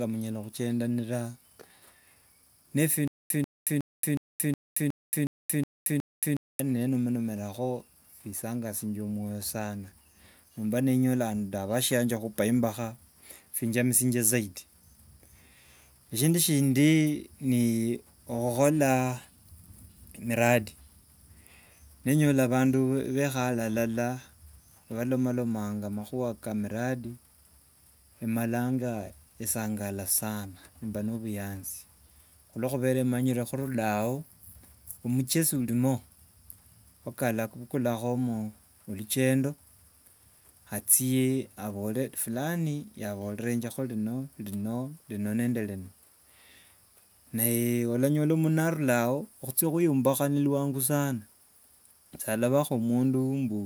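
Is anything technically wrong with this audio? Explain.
Yes. From 3.08 to 6.60 s the speech is caught in a stutter with silent gaps: one 140 ms fragment plays, dead digital silence follows for about 226 ms, and the same fragment returns, nine times at an even 366 ms pace. The likely cause is a stalled player or stream that replayed its last buffered chunk at each retry and then ran dry, so the speech that belonged in that stretch is missing.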